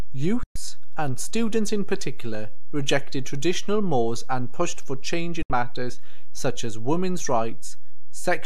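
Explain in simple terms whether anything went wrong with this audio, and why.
The digital receiver twice lost the broadcast signal. This is a digital broadcast dropout: when frames stop arriving intact, the receiver mutes until good ones return. In this speech, the sound fades out almost instantly and falls silent from 0.43 to 0.56 s, about an eighth of a second, and again from 5.42 to 5.50 s, under a tenth of a second. Each gap fits a handful of lost frames, and whatever was said in those moments is simply gone.

The recording also has a DC offset throughout. Somewhere in the chain, a constant was added to the signal, so the whole waveform sits shifted off its centre line instead of swinging evenly around zero. You can't hear this directly. It does waste some of the room the signal has before it hits its loudest possible level, so louder moments run out of space sooner than they should.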